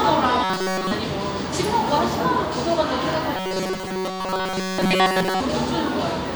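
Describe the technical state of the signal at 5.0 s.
At 5.0 s the sound is inside a stretch of robotic sound from repeated short buffers, running from 3.37 to 5.40 s. Essentially all of it is replaced by a rigid, metallic buzz pitched at 188 Hz. The likely cause is audio arriving too seldom, with each gap filled by looping the last fragment, about 5.3 ms long. Unlike a steady mains hum, this buzz starts and stops with the sound and follows its loudness, while the real detail is lost.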